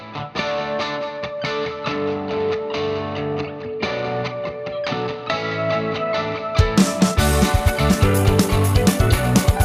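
From 7.09 s to the end at 9.65 s there is a time-stretched section: the sound suddenly runs about 1.77 times faster, rushed, yet its pitch stays put. That rules out a tape-style speed-up, which would raise the pitch. Software likely compressed it by dropping short pieces.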